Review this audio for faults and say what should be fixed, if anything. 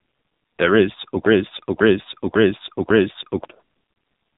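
AMR narrowband mobile codec: the speech was squeezed into a very low-rate AMR-NB mode, which fits roughly 5.9 kbps. Nothing passes above 4 kHz, and the voice sounds heavily buzzy and synthetic throughout. Prevention: encode at a higher AMR mode or use a wideband codec.

Broken-record loop: from 1.26 to 3.45 s, a stall in the player or stream likely left it resending its last buffer. The same 0.55 s piece of speech repeats four times back to back, and the audio meant for that span is lost. Prevention: add stall detection that mutes or resyncs rather than replaying stale buffers.

Lost AMR speech frames: at 3.92 to 3.96 s, the decoder lost about 40 ms, which fits two failed 20 ms frames. It concealed the gap by reusing earlier parameters with falling gain, so the sound dips and warbles briefly. Prevention: strengthen radio-link error protection so fewer frames fail their checks.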